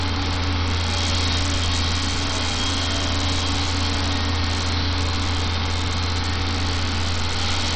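Bluetooth SBC compression runs throughout the clip. The sound is likely squeezed through SBC at a very low bit pool, consistent with about 64 kbps, so the upper sub-bands starve: nothing survives above 9.1 kHz, the remaining treble flickers, and coarse quantisation leaves heavy gritty noise and aliasing.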